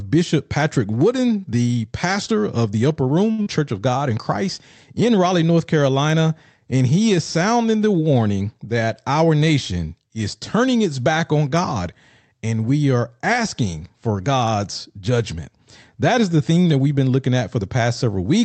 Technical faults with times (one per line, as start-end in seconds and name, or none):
3.31-3.40 short stall from a late packet
3.42-3.48 short concealed packet loss
16.50-16.87 jitter buffer speed-up